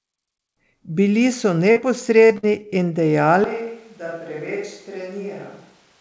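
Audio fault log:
1.72–1.78 s and 2.26–2.32 s, short concealed packet loss: each time about 40 ms of audio failed to arrive in time. The decoder bridged the hole by extending the preceding sound and then blending back, which leaves a brief smear or wobble instead of a silent gap.
2.38–2.45 s, burst of packet loss: about 60 ms went missing in a row, right after the second concealed loss. The receiver carried the last sound forward for about 50 ms while fading it, giving a short held buzz or hiss. Playback then resumes further on with that stretch gone.
3.44 s to the end, switch to a distant microphone: the sound abruptly turns roomy and hollow, thinner in the bass and around 10 dB quieter, with room noise only about 25 dB below it. This is likely the close microphone dropping out and a farther one taking over.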